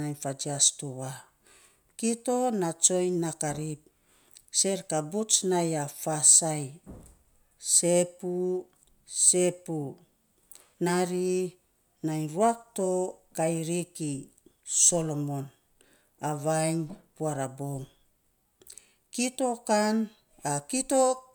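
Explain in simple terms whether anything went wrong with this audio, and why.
Nothing went wrong here: no technical faults can be heard anywhere in this speech recording.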